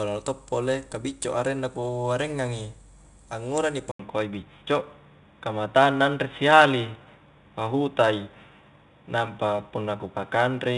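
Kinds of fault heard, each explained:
4-bit ADPCM compression: The coder stores each sample as a coarse 4-bit step from a prediction, adapting its step size as the speech moves. The rounding error becomes a gritty hiss that rides on every loud syllable, and sharp onsets are smeared or distorted. The audio stops at about 10.6 kHz, which fits a sample rate near 22 kHz, and the codec damage is plainly audible throughout.
Input switched to a poorer device: At 3.91 s the recording most likely changed over to a lower-grade input, such as a headset call profile. An 80 ms gap of silence marks the switch. From then to the end, nothing above 3.8 kHz gets through, so the speech turns dull and boxy. The level shifts a little, and a faint new background noise sits far below the voice.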